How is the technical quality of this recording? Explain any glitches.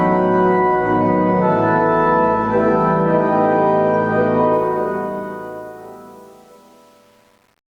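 One fault affects the recording. Truncation distortion on a fade runs from 4.53 s to the end at 7.78 s. The fade was computed without dither at too coarse a resolution, which fits an 8-bit stage. As the level drops, the waveform collapses into a few square steps. From about 5.18 s onward the quiet tail sounds gritty and stepped.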